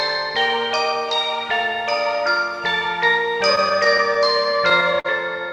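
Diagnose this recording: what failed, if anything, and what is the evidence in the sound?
Network jitter-buffer repeated stalls (stutter) from 3.55 to 5.06 s: eleven brief holds, up to 48 ms, stretch the last sound rather than dropping any, so it drags instead of skipping.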